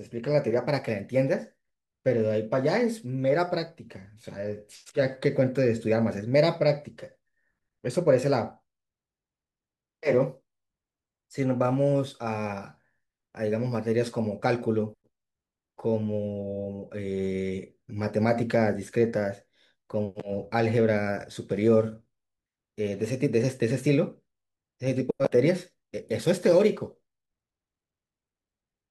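From 25.58 s to the end at 28.91 s, a crude rate conversion hits the speech: samples were dropped to the nearest available one, with no filter, the pattern fitting a 48 kHz to 44.1 kHz change. That skipping repeats on a fixed cycle, adding shifted, inharmonic copies of the speech, roughly 30 dB below it. The result is a gritty, inharmonic fizz riding on louder and brighter sounds through these last seconds.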